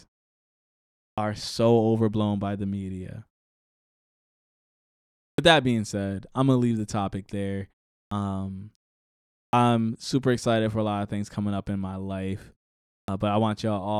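Speech resumes abruptly out of silence five times, at 1.12, 5.32, 8.06, 9.47 and 13.02 s, each onset missing roughly 54 to 63 ms, as before "so overblown by the", before "that being said I'm", and just after "leave the topic there". This is clipped start after a pause: the output device sleeps during gaps of 0.41 to 2.1 s and needs time to wake, swallowing the first sounds.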